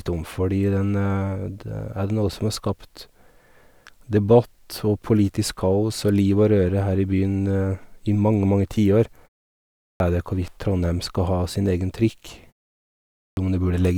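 At 9.78 s and again at 13.16 s there's a clipped start after a pause: the output sleeps through the brief gap, so about 0.22 s and 0.21 s of each onset vanish, and the speech snaps in mid-sound.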